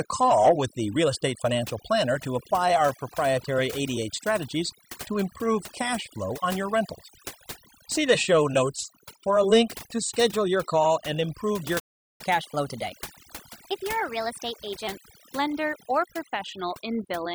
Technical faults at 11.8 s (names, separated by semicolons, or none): overdone noise removal; playback stall